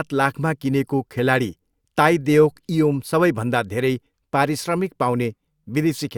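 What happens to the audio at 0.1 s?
Nothing goes wrong at 0.1 s; the speech plays through that moment intact, with no dropout, click or distortion.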